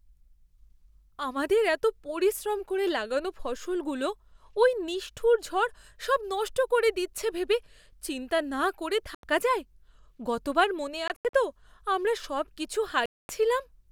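At 9.15 s the speech cuts to silence for about 85 ms. From 11.08 to 11.34 s it breaks up into several short gaps, totalling about 149 ms, the longest 85 ms. At 13.06 s a single hole of about 235 ms follows. The edges are abrupt or fade over a few milliseconds. Speech resumes as if time had run on. This is likely a Bluetooth dropout: packets arrived too late at the headphones and were discarded.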